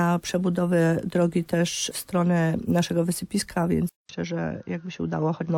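At 3.89 s the sound drops out for about 200 ms and comes back duller and boxier, with nothing above 6.4 kHz. A faint new background hiss sits well below the signal, while the overall level stays about the same through to the end. This is likely an input switched to a poorer device: the recording moved to a narrower-band microphone or headset profile, which brings its own tone and noise floor, and the gap marks the handover.

Between 5.42 and 5.46 s the audio lurches forward, losing roughly 300 ms of material. These are compressed frames skipped: whole blocks of encoded audio were missing or rejected as damaged, so playback jumped ahead. The jump fits roughly seven frames of about 43 ms each.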